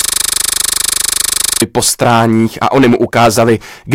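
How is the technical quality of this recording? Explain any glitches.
The technical quality is poor: the recording has two faults, one lasting the whole clip and one at the start.

System hang loop, from 0.00 to 1.62 s, already under way when the clip begins: the computer or driver stalled while the sound hardware kept replaying the same 40 ms of buffered audio. Looping at 25 Hz, it comes across as a steady, mechanical buzz.

Hard clipping, throughout: the signal is driven about 11 dB beyond what a stage in the chain can pass, so peaks are sliced flat, touching around 7 percent of samples. The squared tops add high harmonics, giving a harsh fuzz on every loud passage.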